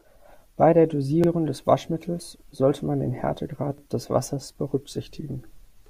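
At 1.24 to 1.28 s and again at 3.78 to 3.83 s, the speech stutters with a brief click as a 44 ms fragment plays twice, the signature of overlapping chunks. The audio was handled in 2.5 s blocks, each beginning before the previous one finished, so the shared slice repeats at every join. On a waveform the duplicated segment sits side by side with a small discontinuity, and a spectrogram shows a thin vertical broadband line there.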